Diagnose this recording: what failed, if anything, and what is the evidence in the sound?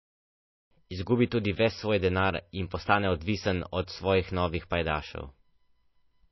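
Codec stage: throughout the speech there is nothing above 5.8 kHz, and plainly audible coding damage persists from start to end. The likely cause is MP3 compression at a starved bitrate, around 24 kbps, where the encoder removes the treble and discards weak spectral lines.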